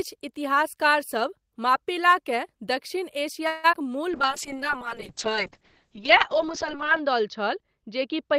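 A speech clip with a chain of network faults around the four-second mark. From 3.47 to 3.66 s there is a call audio freeze: the last sound is stretched into a fading buzz for about 163 ms, likely because packets stalled and the jitter buffer ran dry. Unlike a dropout, nothing is lost; the speech resumes exactly where it stopped, just later. Right after, at 3.72 to 3.75 s, comes a skip ahead: roughly 70 ms of speech vanishes and the two sides are butted together almost seamlessly, pulling the delay back by around 50 ms. It differs from the freeze in that material is missing rather than a gap being inserted. From 3.79 to 4.59 s a jitter buffer slow-down follows, with repeated pitch periods adding 60 ms so the speech runs at 93% speed with unchanged pitch and drawn-out sounds. That steady pitch is what separates it from a tape-style slowdown, which would also lower it. Finally, a call bitrate drop sets in at 4.11 s and lasts to the end, consistent with the encoder falling from about 32 to 6 kbps and staying at its lowest for about 2.85 s. 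The bandwidth narrows from 20 kHz to 8 kHz, so the speech turns muffled and watery, with coarse coding rather than the brief glitches of the packet faults.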